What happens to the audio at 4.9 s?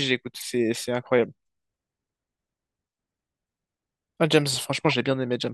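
At 4.89 to 4.94 s a single compressed frame was damaged but still decoded, a corrupt frame decoded. Flipped bits made the decoder read wrong gains or codes, so energy lands at the wrong frequencies for about 46 ms, heard as a brief chirp, squeak, blip or burst of noise peaking around -10 dBFS. Unlike a lost frame that has been concealed, which sounds muted or smeared, this adds unrelated sound on top of the speech.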